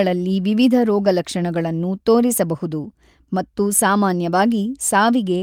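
At 1.05 s and again at 2.83 s the speech briefly turns rougher and noisier for about 20 ms, each time pointing to a single lost packet rebuilt from error correction. The following packet carried a low-bitrate copy of the missing one, and the decoder played that copy. What sets it apart from ordinary loss concealment is that there's no gap or smeared guess; the original speech continues through the moment, just coarser.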